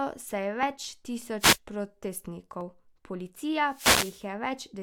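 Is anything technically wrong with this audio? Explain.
Yes, two kinds of fault are present.

Overlap between stream segments: at 0.63 s, right after "se je", and again at 2.61 s, a few milliseconds of audio are trimmed where adjacent segment timestamps overlap. The waveform jumps, giving a tiny skip. The roughly 2 s spacing fits segments about 2 s long.

Wireless microphone noise hit: from 1.39 to 1.58 s and from 3.64 to 4.28 s, the FM radio link fades as reflected signals cancel, and receiver noise rises over the speech. The first is a short swish of static; the second is a longer burst lasting about 0.6 s.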